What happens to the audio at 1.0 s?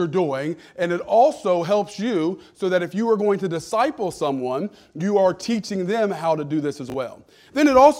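Nothing goes wrong at 1.0 s; the audio at that moment is intact, with no dropout, click, glitch or other audible fault.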